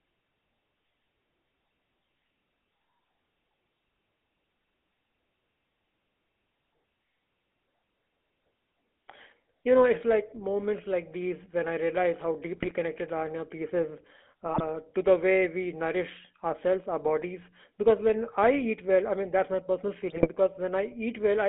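Throughout, the speech carries the buzzy, gravelly texture of the GSM full-rate codec, plainly audible and consistent with a 13 kbps stream. The vocal-tract model is fed a coarse pulse excitation, so fine detail is lost, and the band sits between about 250 Hz and 3.6 kHz.

GSM bit errors break in at 12.56 to 12.73 s after "when I realize how", at 14.46 to 14.64 s between "piece is" and "to the way we", and at 20.1 to 20.29 s after "mean that's my personal". Corrupted filter, pitch and gain values turn each burst into squawks and gargling, pointing to seven or eight damaged frames apiece.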